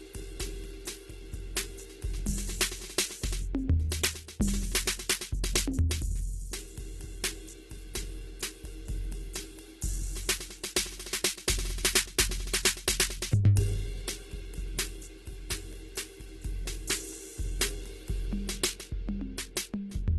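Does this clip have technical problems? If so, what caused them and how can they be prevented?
Yes. Heavy Opus compression in music mode, likely at a very low bitrate around 12 kbps, leaves the music grainy, rough and noisy, with nothing above 12.1 kHz. To prevent this, encode at a much higher bitrate.

Pre-echo comes from the codec spreading block noise ahead of sharp attacks, so a brief hiss precedes the attacks at 5.89 s and from 13.55 to 13.57 s, softening them. To prevent this, give the encoder more bits or use shorter transform blocks around transients.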